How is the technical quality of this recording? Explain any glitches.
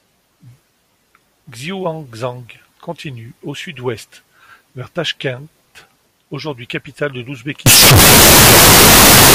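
The recording has one serious glitch near the end. From 7.66 s to 9.35 s, after "aujourd'hui capitale de", the speech turns extremely loud, harsh and square-edged. This is a float read as integer fault. The likely cause is 32-bit float samples being read as 32-bit integers, so the sign and exponent bits drive the level. Background noise becomes as loud as the speech, but the pitch stays traceable.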